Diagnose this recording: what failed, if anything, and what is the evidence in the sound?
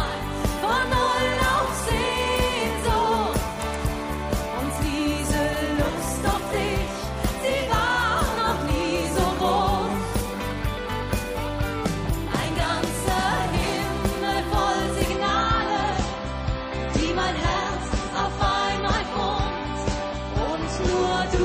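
The stream dropped to a lower bitrate: a network-stage fault in which adaptive streaming switched to a cheaper encoding from 15.09 s to the end at 21.45 s. With no gap, the treble collapses, leaving nothing above 8.3 kHz, and the codec artefacts thicken, pointing to a step from roughly 128 kbit/s MP3 down to about 30 kbit/s. On a spectrogram the upper band is abruptly cut by a flat ceiling at 8.3 kHz, while the waveform stays continuous.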